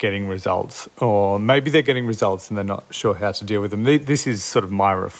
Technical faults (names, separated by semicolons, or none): none